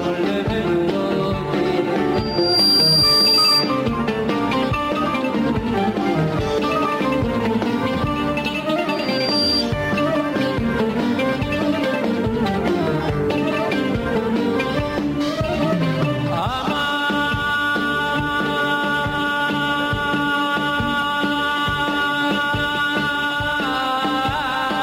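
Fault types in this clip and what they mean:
Loudspeaker feedback squeal: a microphone picks up its own loudspeaker, loop gain passes one at 4.7 kHz, and that tone swells within half a second, twice.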